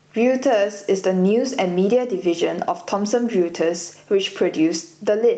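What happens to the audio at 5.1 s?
At 5.1 s the gain pumping that runs through the whole clip is still there: the level ducks by around 10 dB under each louder syllable. That is likely an overdriven input gain with a fast limiter clamping every peak. Unlike a noise gate, it turns the level down rather than cutting it to silence.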